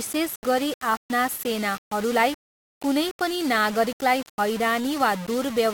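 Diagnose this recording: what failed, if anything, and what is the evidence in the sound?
Low bit depth without dither runs through the whole speech clip, pointing to a sample-format conversion stage. The grit rides on the speech itself, swelling and thinning with level rather than sitting as a steady hiss. The quietest stretches collapse to silence or sputter between adjacent steps. The likely cause is requantisation to about 5 bits by plain rounding, leaving signal-correlated error only around 15 dB below the speech.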